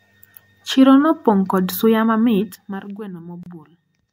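At 3.43 to 3.46 s, after "kod suya mamit mar", a gap at a join of encoded pieces inserts 28 ms of leftover encoder padding. Unlike a dropout, nothing is lost: the speech picks up exactly where it stopped.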